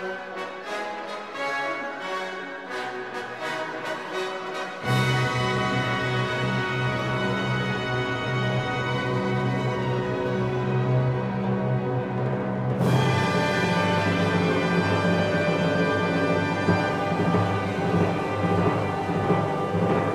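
Throughout, sample clock jitter adds a faint hiss, roughly 50 dB below the signal, that swells with loud, bright passages; on a spectrogram, broadband haze tracks high-frequency energy and vanishes in silences.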